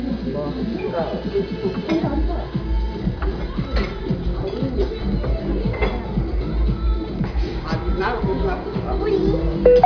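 Nothing stood out as a technical problem on listening to these sounds.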